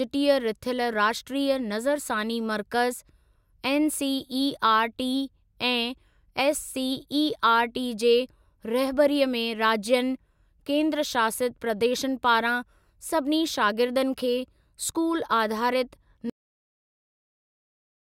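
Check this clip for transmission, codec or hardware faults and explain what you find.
One fault is present: a cut-off end. At 16.30 s the speech stops mid-sound because the final buffers were never written, leaving digital silence to the end without decay. The waveform drops abruptly to a flat line, and the spectrogram shows a sharp vertical edge followed by blankness.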